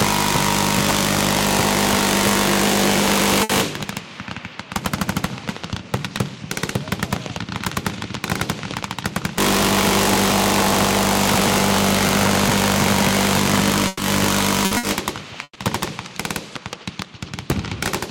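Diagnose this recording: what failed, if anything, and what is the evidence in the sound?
Five brief dropouts, each sounding like the preceding sound held and fading before the audio jumps ahead: 3.43 to 3.52 s, 13.87 to 14.02 s, 14.65 to 14.74 s, 14.77 to 14.86 s and 15.43 to 15.58 s. This is burst of packet loss in the network stage. The receiver concealed each gap for 60 ms or 120 ms by extending the last audio, and the same length of material is missing on resumption. In the final gap the fill fades to silence for about 40 ms.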